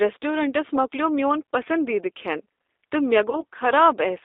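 From the start, the speech carries the sound of the G.729 codec, used here at 8 kbit/s. The voice is rebuilt from a vocal tract filter and a pitch predictor plus a few coded pulses per frame, so it comes through rough and slightly synthetic, with plainly audible damage. The band runs from about 300 Hz to 3.7 kHz. Unlike a plain band-limit filter, this fault adds a grainy, buzzy texture, not just dullness.

Between 3.30 s and 3.43 s comes VoIP packet loss concealed by the speech codec. The gap fits a single lost 20 ms packet. The decoder filled it by extending its last pitch and filter with falling gain, so the voice smears into a brief, fading stretch of synthetic sound instead of dropping to silence or clicking as a plain dropout would. Because each frame builds on the one before, the speech stays weak and distorted well past the lost 20 ms, through to about 3.43 s.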